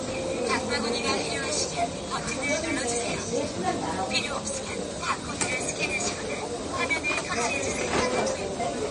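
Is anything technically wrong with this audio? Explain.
Yes. There are two faults, and both run through the whole clip.

The first is USB whine. A steady tone sits at 1 kHz, about 25 dB below the sound itself. Its pitch never moves. USB hardware draws current in 1 ms frames. That pulsing leaks into the audio through the power or ground lines. A 1 ms repeat produces exactly this 1 kHz whine. It hangs over everything as a thin, fixed whistle.

The second is damage that is likely from MP3 compression. Nothing is present above 10 kHz. The top end sounds cut off and dull. The damage is plainly audible, not subtle. The encoder seems to have been short of bits, which fits a bitrate near 38 kbps. With so few bits, it drops the treble at a fixed point. It also discards weaker frequency detail from frame to frame. That leaves the sound coarse and processed.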